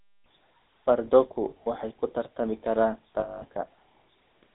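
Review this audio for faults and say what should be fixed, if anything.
The whole clip has GSM full-rate codec damage. The speech sounds buzzy and gravelly. It is confined to about 250 Hz to 3.7 kHz. This codec models the vocal tract and drives it with sparse, regular pulses. The roughness is consistent with a 13 kbps stream. Prevent this by recording or routing the call over a wideband codec instead of GSM full rate.

There are lost GSM frames at 1.64 to 1.67 s and 3.20 to 3.43 s. Each gap is filled by repeating the last good frame. The first is brief, fitting one 20 ms frame. The second rings metallically for 220 ms, about eleven frames. Prevent this by improving the radio link or adding error protection so frames arrive intact.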